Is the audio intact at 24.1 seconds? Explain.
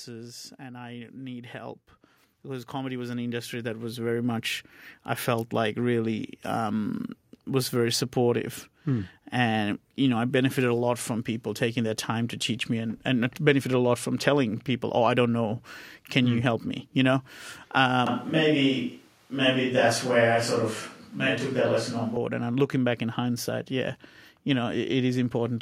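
Yes, the speech at 24.1 seconds plays through intact, with no dropout, click, distortion or other fault at that moment.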